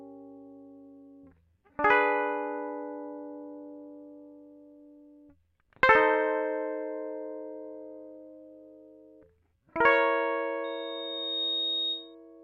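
Loudspeaker feedback squeal enters the music at 10.64 s and lasts until 12.15 s. A microphone is hearing the loudspeaker it drives, and around 3.7 kHz the loop gain has passed one, so that frequency feeds on itself. A thin tone appears and swells over roughly the first three quarters of a second, reaching about the same level as the music and holding there as a piercing squeal until it stops.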